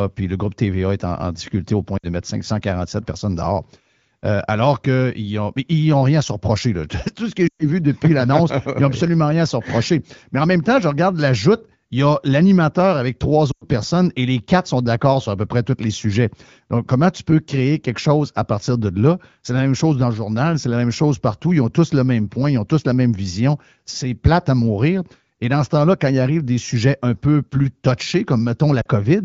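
Radio errors corrupted AMR speech frames, and the decoder filled each gap by repeating the last good pitch and vocal tract settings at falling gain. These lost AMR speech frames are audible as dropouts that fall to near silence within two frames at 1.97 s (60 ms), 7.48 s (120 ms), 13.51 s (100 ms) and 28.81 s (40 ms), and the voice briefly returns weak.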